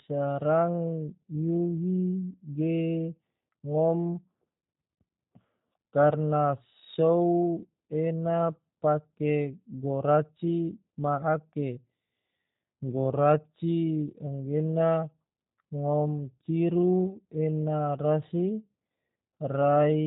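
From the first second to the last, the speech has that G.729 codec sound, consistent with the G.729A variant running at around 8 kbit/s. Everything above about 3.8 kHz is simply gone, so it's boxed into a narrow telephone band. The codec has rebuilt each short frame from a vocal tract model, a pitch guess and a handful of pulses, and you can plainly hear it. Everything comes out a bit rough, buzzy and synthetic, though still easy to follow.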